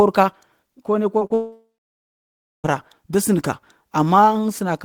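Just after "ka kone", at about 1.19 to 1.23 s, comes the first short concealed packet loss. Roughly 20 ms of the speech never arrived, and the receiver patched about 14 ms of it by extending the preceding sound before blending back. A second one follows at 1.27 to 1.32 s, with about 40 ms lost and 31 ms filled. Each is heard as a brief smear or wobble. On a spectrogram the harmonics look frozen or smoothed for a few hundredths of a second.

From 1.34 s to 2.72 s the speech cuts out, most likely from a long network dropout, with about 1.3 s of audio never played. The last sound is first stretched into a fading buzz or hiss, and then roughly a second of near-silence remains before speech resumes with the gap's content missing. On a waveform this appears as a decaying tail into a flat line, and on a spectrogram as blurred, fading bands followed by an empty stretch.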